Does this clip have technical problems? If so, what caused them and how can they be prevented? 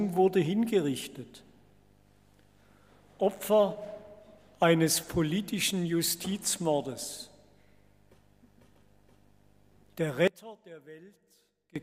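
Yes. From 10.28 s to 11.76 s, one channel inverted is the likely cause: one stereo channel appears to have its polarity reversed, so when the two sides are summed to mono, everything they share cancels. The sound drops by about 23 dB and what survives is only the difference between the channels, a faint residue. Checking polarity on every channel in the signal chain and monitoring the mono sum before release would prevent it.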